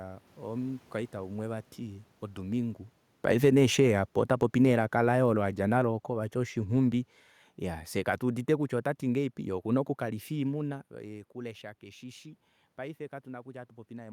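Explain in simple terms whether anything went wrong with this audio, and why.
Automatic gain falling, from about 2.43 to 7.15 seconds: the recorder decided the sound was too loud or the background too noisy and slowly turned its own volume down. The voice and the room noise behind it fade together, ending noticeably quieter, unlike the talker's natural movements around 2.5 and 10.5 seconds.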